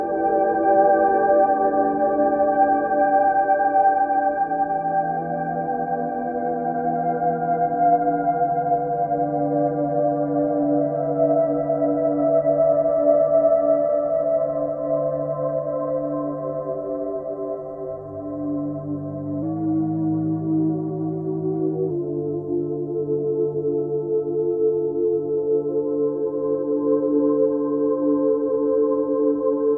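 From 19.42 s to 21.90 s the sound shows a wrong sample rate fault: it runs about 1.09 times fast and about 1.5 semitones sharp. Speed and pitch rise together, which fits material recorded at 22 kHz being played at 24 kHz without conversion.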